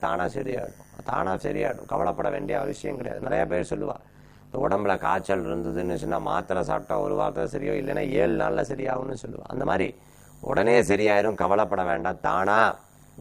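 Overlap-add ripple runs from start to finish: windowed frames were rejoined with an overlap that fails to sum to constant gain, so level swings by about 60 dB around 100 times a second. It sounds like a harsh, buzzy robotic tremolo; the waveform shows regular envelope notches, the spectrogram fine vertical striping.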